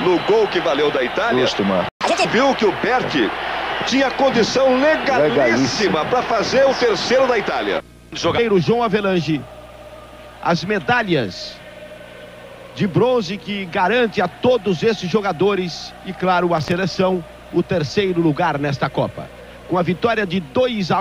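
At 1.89 s the sound cuts out abruptly in mid-flow. This is a playback stall. The output stays silent for 120 ms, until 2.01 s. The likely cause is that the player ran short of data, or its playback thread was held up, so nothing reached the output. The gap is short but clearly audible. The sound does not fade out. It simply stops, then resumes.

From 2.01 s to 2.25 s comes a catch-up at higher speed. The player works through its backlog at 1.5 times normal speed by resampling. It does this to recover the time lost in the gap. Speed and pitch rise together, with the pitch up by about seven semitones. The sound turns briefly quick and squeaky. After this quarter-second burst, it drops back to normal pace and pitch.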